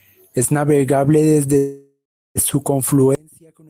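A speech recording with two separate faults. From 1.57 s to 2.38 s there is a call audio freeze: the last sound is stretched into a buzzy tail that decays into about 340 ms of silence, and then the speech resumes where it left off. Nothing is skipped, but everything after it lands roughly 0.78 s later. The likely cause is delayed packets draining the jitter buffer. On a spectrogram, the harmonics smear into flat horizontal bands that fade to an empty column. From 3.15 s to the end, the level collapses by about 32 dB into a faint residue, which is the signature of one channel inverted, likely cancelling the centred speech when the two sides are summed to mono. The waveform shrinks to a sliver there.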